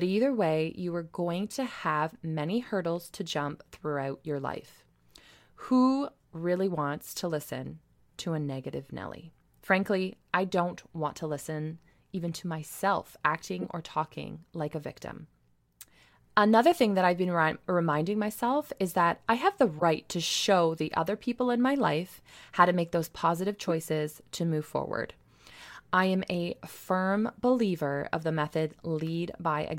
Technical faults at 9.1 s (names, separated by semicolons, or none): none